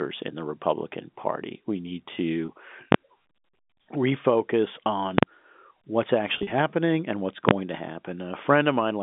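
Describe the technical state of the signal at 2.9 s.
At 2.92 to 2.94 s a calculation in the processing chain broke down and returned infinite or invalid numbers, which were forced to the largest positive or negative value. The result is invalid numbers at full scale: the output sits flat at one extreme value for about 21 ms, a span that fits a 1024-sample processing block. Because the block is so short, the start and end pops merge into a single loud bang.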